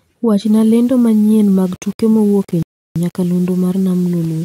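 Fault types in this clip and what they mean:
Low bit depth without dither: From about 0.46 s to the end, the speech takes on a grainy, rough edge that rises and falls with the sound itself. It's worst on quiet syllables and tails, which crumble or sputter instead of fading smoothly. That's most likely the signal being rounded to something like 6 bits with no dither. The error sits roughly 30 dB below the speech and follows it around rather than settling into a steady hiss.
Rebuffering stall: At 2.63 s the audio drops to silence and stays there until 2.96 s, then picks up exactly where it left off, with nothing skipped. That's the player running out of downloaded data and waiting for more to arrive. The speech itself isn't damaged, just pushed later, which adds about a third of a second (331 ms) of dead air to the clip's running time.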